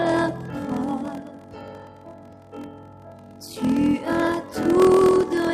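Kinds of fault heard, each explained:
Noise suppressor applied to music or sounds: a speech-tuned suppressor treats sustained tones and tails as noise, so level pumps by around 10 dB throughout.
Block size mismatch (padded): throughout, zero-filled gaps in each block cause a 41.7 Hz buzz and playback at 0.889 speed, which fits 1024-sample blocks padded to a larger read.
Sound cut by the noise suppressor: from 1.22 to 3.43 s, sustained sound is mistaken for noise and pulled down by up to about 8 dB, over roughly two seconds.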